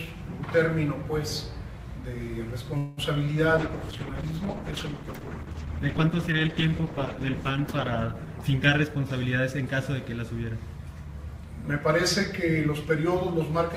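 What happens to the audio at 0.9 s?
Nothing goes wrong at 0.9 s; the audio plays through that moment intact, with no dropout, click or other disturbance.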